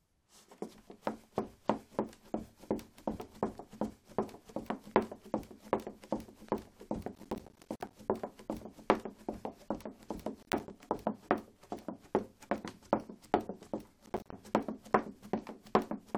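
Processor overload crackle at 7.15–7.93 s, 10.43–10.70 s and 14.06–14.33 s: many roughly 10 ms buffers missed again and again, each leaving a hard-edged gap of silence. Unlike a single dropout, it tears repeatedly and stops when the load clears.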